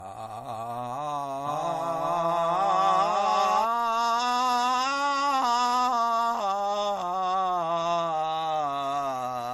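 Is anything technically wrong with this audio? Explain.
Yes, there are two faults in this music.

Generation loss runs through the whole clip. The sound was most likely pushed through a lossy MP3 codec around five times, at roughly 62 to 64 kbit/s. Each re-encode quantises on a shifted frame grid, so errors and spectral gaps pile up instead of staying fixed. The result is swirly, hollow and smeared beyond what that bitrate alone would give, with blurred attacks and nothing above 16.5 kHz.

A doubled audio track appears from 1.46 s to 3.64 s. A second full-band copy was likely mixed in by a slower capture path or a misaligned edit, trailing the original by about half a second at roughly equal level. Because it carries no decay or room colouring, it reads as a dry, hard repeat of everything, and it cuts in and out abruptly at those two points.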